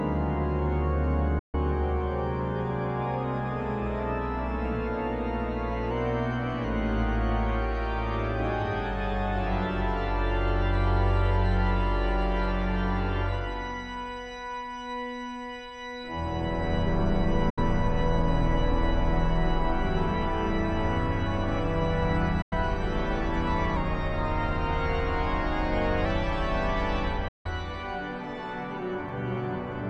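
At 1.39 s the sound drops out for 144 ms, to 1.55 s, with an 8 ms fade. This is a digital broadcast dropout: the receiver lost or rejected a run of frames and muted until valid data returned, so the programme material in that gap is gone. The length fits six 24 ms frames.

From 5.91 s to 6.64 s the audio runs 5.86% fast and sits about 98.5 cents sharp, close to a semitone. Speed and pitch move together, which points to a drift correction step, likely a clock-matching resampler jumping its rate to drain a buffer.

Further dropouts with the same 8 ms fades follow at 17.50 s for 72 ms and at 22.42 s for 96 ms.

From 23.77 s to 26.05 s a second drift correction step runs the other way: 5.86% slow and about 104 cents flat, again about a semitone. It is longer than the first, ending at 26.05 s.

The last dropout, at 27.28 s, is the longest at 168 ms, a hole lasting to 27.46 s.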